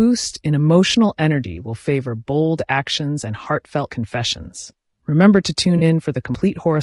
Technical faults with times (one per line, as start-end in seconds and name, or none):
0.00-6.82 low-delay AAC compression
5.77-5.83 AAC frame loss with concealment
6.35 audio missing between chunks